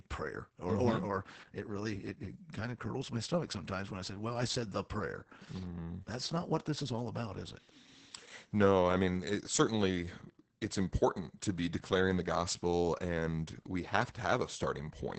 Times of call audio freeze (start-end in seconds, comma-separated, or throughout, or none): none